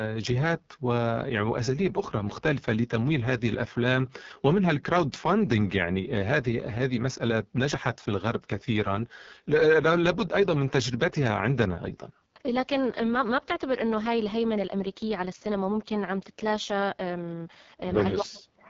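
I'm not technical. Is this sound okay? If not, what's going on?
No. AMR wideband (HD Voice) codec, throughout: the phone-call compression is set very low, so the speech sounds rough and raspy, and the highest sounds are missing.

Speech suppressed in double talk, from 18.24 s to the end: the voice drops sharply for about a third of a second, likely because an echo canceller muted it while someone else was talking.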